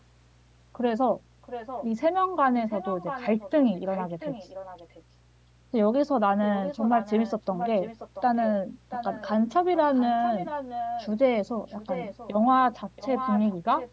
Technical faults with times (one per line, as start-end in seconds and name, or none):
0.00-13.92 mains hum
1.42-1.86 echo leak
2.69-5.03 echo leak
6.41-8.48 echo leak
8.89-9.30 echo leak
9.74-11.08 echo leak
11.68-12.32 echo leak
12.96-13.91 echo leak